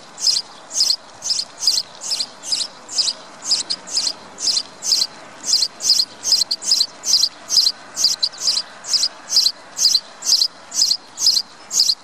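Frames out of order occur at 3.61–3.80 s, 6.42–6.61 s and 8.13–8.33 s. In each, two adjacent blocks of about 93 ms were decoded in swapped order, which fits pairs of four-frame runs. Each stretch plays as a brief garbled flutter, and no time goes missing. On a waveform the envelope jumps abruptly at each join. A spectrogram shows vertical seams where the spectral content changes discontinuously rather than evolving smoothly.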